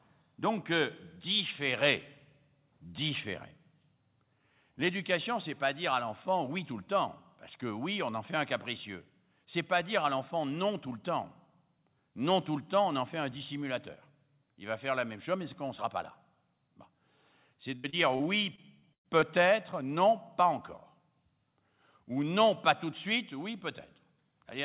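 Repeated packet loss (robotic sound) hits this speech clip from 17.76 to 19.24 s, ending just before "non pas". Roughly seven separate holes open in that stretch, the longest about 112 ms. Each is patched by stretching the last bit of audio forward, about 314 ms in total, or around a fifth of the span. The rapid run of such patches makes the sound choppy, with pieces missing. The call path itself leaves nothing above 4 kHz, which fits a narrowband G.711-type codec.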